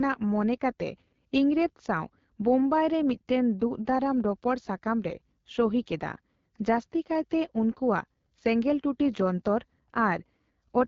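AMR wideband (HD Voice) codec damage runs through the whole speech clip and is plainly audible. The codec models speech up to 6.4 kHz as a vocal tract driven by pulses, then fills the band from 6.4 to 7 kHz with shaped noise, so nothing is heard above 7 kHz. The rough, raspy texture fits one of its lowest bitrate modes, around 8.85 kbit/s.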